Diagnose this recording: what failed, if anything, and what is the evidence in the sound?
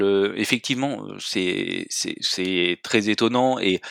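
Nothing failed here: listening across the whole speech recording, there's no audible fault at any stage of the chain.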